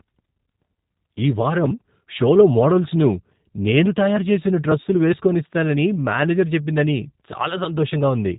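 From start to finish, the speech passes through the G.729 codec, and the damage is plainly audible. The codec does not store the waveform. It rebuilds each 10 ms frame from a vocal tract filter, a pitch predictor and a few pulses. That economy fits an 8 kbit/s rate. Nothing above 3.8 kHz survives, so the sound is dull and boxy. Consonants lose their crispness. The voice has a rough, synthetic buzz.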